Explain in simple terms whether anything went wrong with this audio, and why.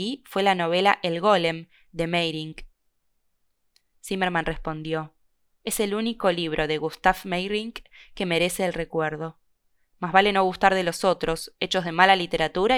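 Nothing went wrong with the technical side of this speech recording: the signal stays steady and intact throughout, with no audible glitches, gaps or distortion at any point.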